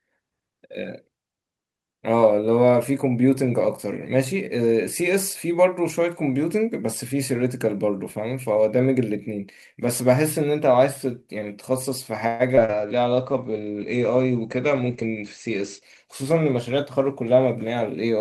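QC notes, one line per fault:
12.27–12.42 s, call audio freeze: sound stalls into a fading buzz for about 121 ms, likely a jitter buffer underrun; the waveform shows a decaying smear, then resumes with nothing lost.
12.55–12.60 s, skip ahead: roughly 70 ms of audio is dropped and playback jumps forward; the waveform shows an abrupt splice with almost no gap.
12.64 s to the end, call bitrate drop: encoding falls from 40 to 14 kbps, sounding rough and muffled; the spectrogram shows content above 8 kHz vanishing, lowest for about 2.8 s.
12.65–12.71 s, short concealed packet loss: about 40 ms never arrived and was patched with 36 ms of extrapolated sound, heard as a brief smear with blurred harmonics on the spectrogram.
12.71–13.51 s, jitter buffer slow-down: repeated pitch periods add about 85 ms, so the sound runs at 90% speed with unchanged pitch; the spectrogram shows stretched syllables.
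14.82–15.61 s and 16.04–16.98 s, jitter buffer speed-up: short pitch-period cuts remove roughly 70 ms each, giving 108% and 106% speed at the same pitch; the spectrogram shows compressed, hurried events.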